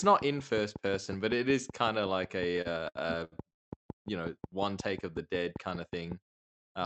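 From 0.04 s to 6.13 s, a train of clicks runs under the speech at a steady 5.5 per second, about thirty in all. The likely cause is interference or a struggling interface injecting identical pulses. They tick audibly through pauses and peak a few decibels above the speech itself.

Between 2.51 s and 3.69 s, packets arrived late and the jitter buffer repeatedly ran dry, producing repeated stalls (stutter). Across ten gaps, with the longest 144 ms, the receiver stretched the last sound for 388 ms in total. No speech is lost, but a third of that stretch drags and stutters.

From 5.12 s to 5.44 s, a jitter buffer slow-down builds up reserve by repeating single pitch periods, adding 38 ms. Speech there plays at 91% speed with unchanged pitch, so sounds are audibly drawn out.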